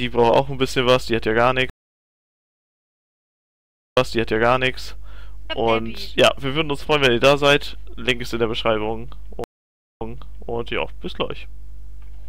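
The audio suffers two stream reconnects, at 1.70 s and 9.44 s. The connection drops, the player goes silent, then starts a fresh decoder mid-stream: 2.26 s of silence the first time, 0.56 s the second. The server resends a burst, so playback resumes about 0.79 s and 0.53 s earlier, repeating material. A waveform shows flat gaps ending in a brief fade-in; a spectrogram shows blank columns followed by a repeated pattern.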